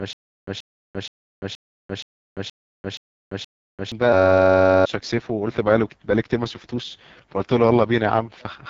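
The whole clip carries AMR wideband (HD Voice) codec damage, and it is heavy. The speech sounds rough and raspy, with nothing above 7.4 kHz. That harshness points to AMR-WB running at its lowest 6.6 kbit/s mode, where the coarse pulse excitation can no longer model the voice cleanly.

From the start to 3.92 s there is a stutter with silent gaps, already under way when the clip opens. A burst of about 0.13 s repeats eight times at a steady 473 ms period, with about 343 ms of digital silence after each. This most likely comes from a stalled stream that replayed its last fragment at every retry and then ran dry, so the intervening speech is missing.

From 4.13 to 4.85 s a system hang loop takes over. A 10.67 ms slice of audio repeats exactly 68 times, producing a steady buzz at 93.8 Hz. That loop length fits a 512-sample buffer being cycled while the system froze, and roughly 0.7 s of audio is lost.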